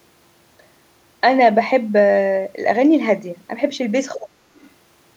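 A speech recording whose echo canceller likely could not separate the talker from loudspeaker echo while both sides spoke, so it turned everything down. That is speech suppressed in double talk: from 4.17 to 4.42 s the talker's voice sinks sharply, dropping by about 30 dB at its deepest. Right after, from 4.56 to 4.70 s, the canceller likely failed to fully remove the loudspeaker signal from the microphone, so the other side's voice leaks through as a faint scrap, about 35 dB below the talker.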